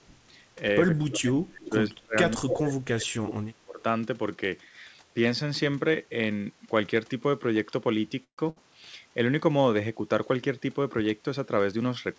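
Speech heard over a call, with nothing above 8 kHz, as a G.722 call path gives. From 1.02 to 2.15 s the talker's level sinks and breaks up. It drops by roughly 30 dB at its deepest, over about a second in all. It happens again from 2.34 to 3.8 s, over about a second and a half. This is speech suppressed in double talk. The likely cause is both sides speaking at once. The echo canceller could not tell the near voice from loudspeaker echo, so it pulled both down. Inside those stretches, an echo leak shows up twice. From 1.65 to 1.69 s a faint delayed copy of the voice comes back, about 15 dB below the speech. From 2.49 to 2.56 s it is much stronger, about 5 dB below. Both copies trail by 156 ms. A loudspeaker on the far end was likely feeding its microphone, and its canceller let scraps of that through. At 8.24 s the audio stalls until 8.40 s. The last sound is stretched out and fades, then about 90 ms of silence. 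Speech then resumes where it stopped, 138 ms later than before, with nothing lost. That is a call audio freeze. Packets were likely held up and the jitter buffer ran dry. Shortly after, from 8.50 to 8.58 s, comes a burst of packet loss. The last sound is held for 63 ms and fades. The speech jumps ahead, so about 60 ms of it is gone.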